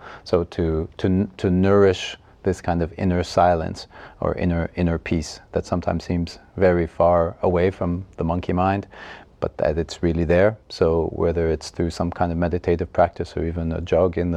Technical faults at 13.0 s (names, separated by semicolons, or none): none